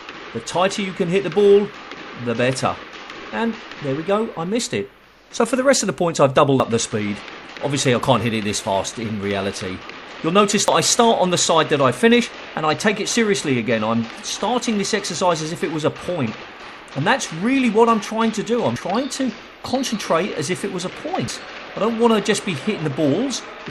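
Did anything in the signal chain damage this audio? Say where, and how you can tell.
Yes. A dropped buffer (overrun) shows up as a jump ahead in the sound at 6.6, 10.68, 18.76 and 21.28 s, with no gap of silence. The losses are short, around 40 ms at the first two and closer to 70 and 100 ms at the last two. This points to the driver or buffer stage: the capture software likely failed to collect its samples before the hardware overwrote them, so the surviving audio on each side was butted together directly.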